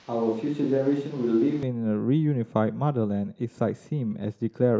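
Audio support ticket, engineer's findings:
Roomy, hollow, bass-light sound from the start to 1.63 s, about 5 dB quieter, more room noise; likely a switch to a distant microphone replacing the close mic.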